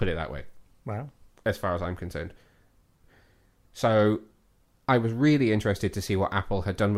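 Nothing in the recording stands out as a technical fault, so there's no trouble to report here.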